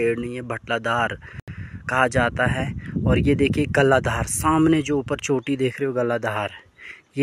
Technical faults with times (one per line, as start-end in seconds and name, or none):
1.40-1.48 Bluetooth dropout